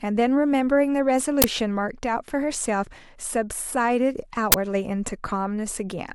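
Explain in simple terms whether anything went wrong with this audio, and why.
Twice, the playback system sent a chunk of memory to the speakers before any audio had been written into it, a fault called an uninitialised buffer. Whatever leftover data sat there got played as if it were sound. You hear it as a sudden, loud blast of harsh digital noise lasting about 20 ms, cutting across the speech from 1.42 to 1.44 s and again from 4.52 to 4.54 s.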